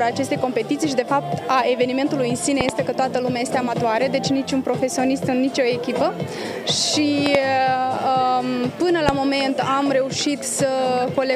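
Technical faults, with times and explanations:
2.61–2.71 s, 7.26–7.37 s and 9.09–9.11 s: loud pop, two quick sharp pops at each of the first two times and one at the last, peaking about 20 dB above the sound, which carries on underneath; likely a sudden voltage pulse from a plug, switch or static discharge.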